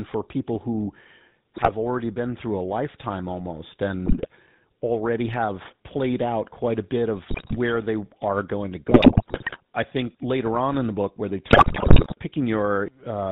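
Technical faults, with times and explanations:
Throughout: GSM full-rate codec. The speech has a plainly audible buzzy, gravelly roughness. The codec rebuilds the voice from a vocal-tract model driven by evenly spaced pulses. Only a thinned excitation survives, so fine detail turns to buzz. Nothing above 4 kHz gets through, which leaves the sound narrow and muffled. The bitrate sounds like about 13 kbps, which fits the original full-rate standard.
1.56–1.73 s, 4.06–4.28 s, 7.24–7.57 s, 8.88–9.58 s, 11.5–12.15 s: GSM bit errors. The voice breaks into squawks, pops and gargling in five bursts. The second falls between "through a lifetime almost" and "already have played out". The fourth sits between "they are going to" and "I think later on". The last starts after "the book where they" and is the harshest. Corrupted filter, pitch or gain values bend the spectrum or spike the level, frame by frame.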